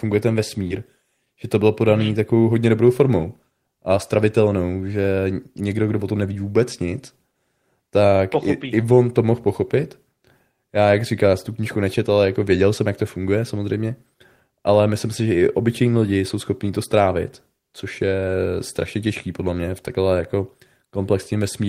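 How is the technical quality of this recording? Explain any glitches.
One glitch stands out: a short concealed packet loss between 0.67 and 0.72 s. About 20 ms of the call arrived too late for the decoder, so the receiver filled roughly 23 ms by extending the preceding sound and then blended back into the real signal. This is heard as a brief smear or wobble.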